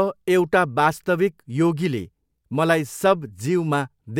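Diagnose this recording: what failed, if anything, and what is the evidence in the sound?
Nothing failed; no faults heard.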